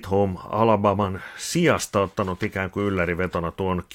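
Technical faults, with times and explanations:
0.13 to 3.94 s, clock slip clicks: a faint, steady ticking rides under the speech, with roughly fourteen ticks a second (about one every 70 ms), around fifty in all, clearest on the louder, sustained parts and vanishing in pauses. The even spacing fits one sample being dropped or repeated each time, likely from two unsynchronised clocks drifting apart by something like 300 ppm.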